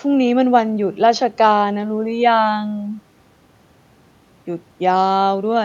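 Listening closely to the speech, nothing technically wrong stood out at any point.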